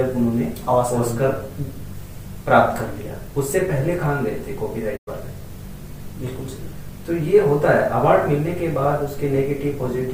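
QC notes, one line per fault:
4.96–5.09 s, digital broadcast dropout: the audio fades out over about 20 ms and goes silent, with roughly 96 ms of programme lost, consistent with three corrupted frames. The receiver muted until valid frames arrived again, so the sound resumes partway on.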